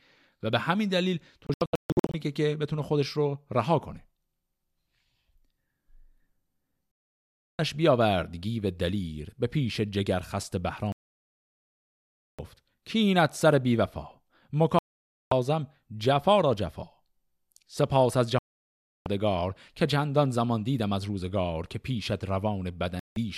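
Six digital broadcast dropouts run through this speech, at 1.47–2.14 s, 6.99–7.59 s, 10.92–12.39 s, 14.79–15.32 s, 18.39–19.06 s and 22.99–23.17 s. Each time the receiver stops getting clean frames and mutes until good data returns, so the audio just drops out and picks up further along, with the missing stretch gone for good. The first one breaks into several short holes, the longest about 0.14 s. The one at 10.92 s is the worst, a silence of nearly 1.5 s.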